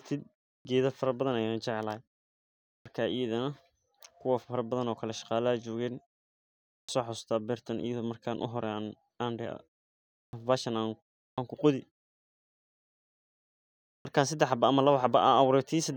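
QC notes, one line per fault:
0.57, 2.76, 6.79, 10.25, 11.28 and 13.97 s: clipped start after a pause. After each gap of 0.3 to 2.1 s, the first 80 to 96 ms of speech goes missing and onsets snap in abruptly, like the output device dozing in silence and waking late.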